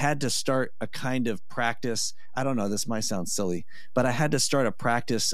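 From start to finish the speech sits on a DC offset of about -31 dBFS: the whole waveform rides a constant shift off zero. Unlike hum or rumble, nothing audible results; it shows only as fixed energy at 0 Hz, quietly eating headroom.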